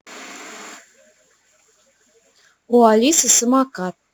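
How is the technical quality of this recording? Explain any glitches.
The recording has one fault, crude rate conversion, present for the whole clip. Somewhere in the chain the sample rate was changed without a proper filter, with each output sample simply taken from the nearest input sample. The pattern of skipped samples points to a conversion from 48 kHz to 44.1 kHz. That cyclic timing error produces spurious, inharmonic tones sitting roughly 20 dB below the speech. They come across as a gritty fizz riding on louder and brighter syllables.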